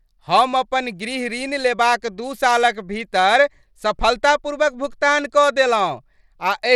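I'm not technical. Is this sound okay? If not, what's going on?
No. From start to finish the speech has a gritty, roughened edge, and the crispest, highest sounds seem to flicker or thin out instead of staying steady. That is likely Bluetooth SBC compression. To save data over the wireless link, the sound is split into a few broad pitch bands, and the highest ones get little attention, so nothing survives above about 17 kHz. Low-bitrate MP3 tends toward watery swirls, but this damage is coarse grain and an unstable top end.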